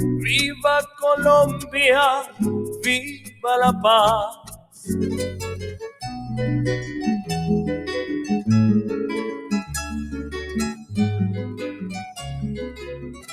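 A noise suppressor applied to music or sounds runs throughout, mistaking steady material for noise. Level pumps by roughly 10 dB, tracking sustain rather than loudness as a compressor would. Sound cut by the noise suppressor sinks at 3.06–3.44, 4.35–4.84, 10.75–10.94, 11.5–11.85 and 12.7–13.29 s, by about 9 to 16 dB. Attacks survive, so these are not dropouts.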